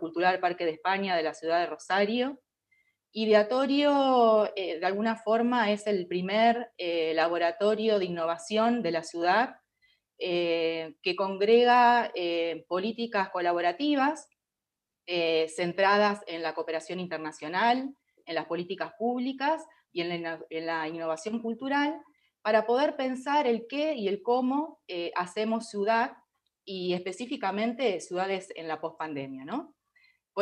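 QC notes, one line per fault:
No faults heard anywhere in the audio.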